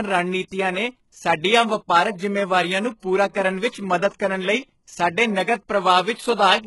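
Speech, and it sounds heavily coded the whole way through. Nothing comes through above 11.5 kHz, and the treble that is there has that copied-up, metallic quality where the upper harmonics don't quite match what's underneath, so the s sounds come out gritty and lispy. That's most likely HE-AAC compression, which codes only the lower band and fills in the top by band replication from a rough envelope. The damage level points to a very low bitrate, around 12 kbps. There's also pre-echo in two places. From 3.30 to 3.35 s, a short hiss smears about 46 ms ahead of an attack, softening its onset. At 4.19 s there's a much shorter one, about 11 ms. In both cases the codec has spread the quantisation noise sized for the loud transient across its whole block, so the quiet moment just before the hit gets filled with noise too.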